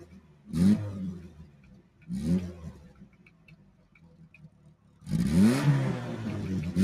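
A noise suppressor meant for speech stays active across the whole clip. It treats steady parts of the sound as noise. Gain rises and falls by roughly 20 dB. Attacks pass, but sustained parts and tails sink, so the sound pumps and thins.

The suppressor cuts the sound hardest in three stretches: 0.05 to 0.47 s, 1.3 to 2.04 s, and 2.9 to 5.02 s. Each drops by up to about 6 dB. Held material fades and decays end early. The longest dip lasts about two seconds.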